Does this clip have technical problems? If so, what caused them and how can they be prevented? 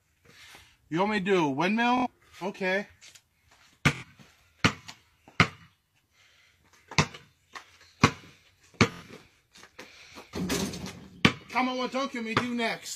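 Yes. Bluetooth stutter occurs three times: at 1.98 to 2.07 s, 3.95 to 4.04 s, and 8.92 to 9.03 s. Each is a short buzzing repeat. The wireless link dropped packets, and the receiver looped its last buffer while waiting. The first two gaps last about 70 ms each, which fits three lost frames. The third lasts about 93 ms, which fits four. The audio then jumps ahead past the lost section. To prevent it, keep the devices close with a clear line of sight and away from Wi-Fi or other 2.4 GHz interference.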